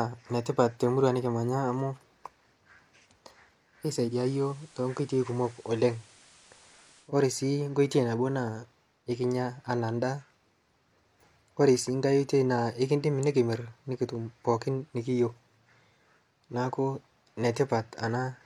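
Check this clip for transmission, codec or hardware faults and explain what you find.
One fault is present: digital radio blending to analogue, from 4.03 to 7.12 s. The receiver lost its digital stream and cross-faded over 143 ms to FM, so the speech becomes slightly quieter (about 1 dB) with hiss some 25 dB down. The spectrogram shows a flat noise floor until the switch back.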